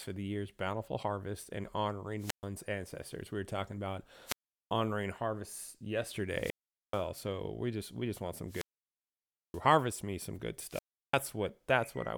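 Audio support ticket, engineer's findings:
Wireless microphone squelch dropout, five events: 2.18–2.46 s after "year's bountiful harvest and" (mute about 126 ms), 4.25–4.72 s (385 ms), 6.30–7.07 s before "so we just we" (433 ms), 8.46–9.63 s (929 ms), 10.67–11.20 s after "me some good" (346 ms). Probable component: analogue FM RF link, receiver squelch. RF fade, hiss rises, squelch gates output. Waveform: flatline gaps. Spectrogram: broadband hiss smear, then blank column, speech harmonics resuming.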